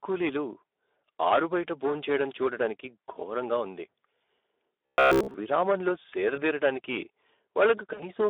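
Hard clipping runs through the whole speech recording: the level is overdriven by about 14 dB, so roughly one sample in twenty hits the ceiling and is flattened, and those squared-off peaks throw harsh high harmonics that give every loud syllable a gritty fuzz. Speex codec damage is also present throughout and plainly audible. The sound is confined to a narrow line band of 300 Hz to 3.6 kHz, and its hoarse, noisy texture fits a low bitrate around 11 kbps, where the CELP excitation is too coarse to carry the voice's fine detail. From 4.86 to 5.34 s the voice turns into a robotic sound from repeated short buffers, a rigid metallic buzz at 66.7 Hz. This is likely audio arriving too late while the last 15 ms or so is looped to fill the gap, so most of the real signal in that stretch is skipped and the loop length sets the pitch. VoIP packet loss concealed by the speech codec appears at 6.35 to 6.41 s, which fits a single lost 20 ms frame, and again at 7.93 to 8.10 s, consistent with about 60 ms or three frames missing. 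Each time, the decoder extrapolates from the last pitch and filter with falling gain, and the voice stays weak until it recovers.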